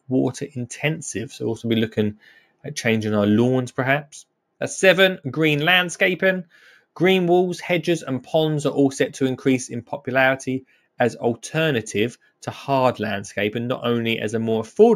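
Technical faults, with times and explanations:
Throughout, imaging from linear upsampling: straight-line interpolation is a weak filter, suggesting a 16 kHz source raised to 44.1 kHz. The top is dulled, and a faint mirrored copy sits between 8 and 16 kHz, roughly 30 dB down, adding metallic shimmer to sibilants.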